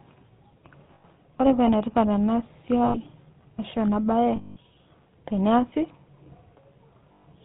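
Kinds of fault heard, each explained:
GSM full-rate codec: The speech is coded by modelling the vocal tract and driving it with sparse, regularly spaced pulses. Nothing above 4 kHz survives. The result is a plainly audible buzzy, gravelly roughness across the whole clip, which fits the 13 kbps full-rate codec.
Lost GSM frames: Missing frames were filled by repeating the last good frame. Short gaps at 0.94, 2.84 and 7.12 s, each about 0.1 s, ring roughly and metallically. A longer one at 4.36 s, about 0.2 s, rings on for longer.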